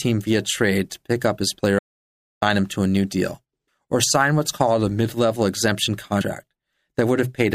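At 1.79 s, right after "pick up his player", there's an audio dropout to silence: the speech stops dead for about 0.63 s, with no room tone at all, until "him to a new" at 2.42 s. Likely the input cut out while silence kept being written, so whatever came in between is simply gone.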